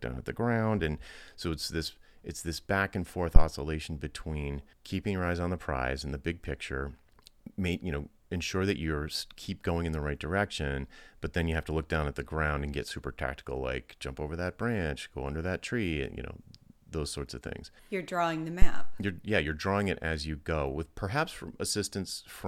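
Phantom power thumps at 3.36 s and 18.62 s, from a supply step passing through the coupling capacitors: deep thumps peaking at about -3 and -6 dBFS, decaying in 22 and 101 ms, showing as tall waveform spikes and low-frequency smears on the spectrogram.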